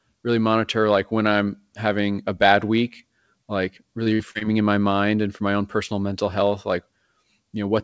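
Speech carried over a wideband call path, with nothing above 8 kHz, which fits G.722. From 4.04 to 4.43 s, between "a bad week like" and "in my mind and", it suffers repeated packet loss (robotic sound): several short gaps, the longest 55 ms, are each patched by stretching the preceding sound, so about a third of that stretch is synthetic and turns choppy. A single dropout would leave one clean hole instead.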